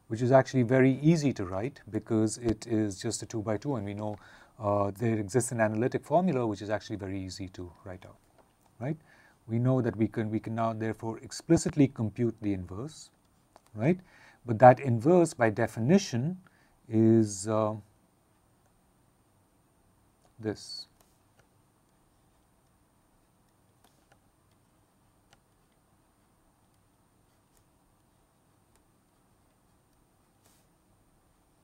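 A voltage spike, likely from a plug, switch, static discharge or driver glitch, got into the signal path twice, producing loud pops over the audio. At 2.49 to 2.51 s a single sharp pop peaks roughly 10 dB above the surrounding sound. From 11.57 to 11.71 s a pair of pops follows in quick succession, around 5 dB above the signal. The audio continues unbroken underneath both.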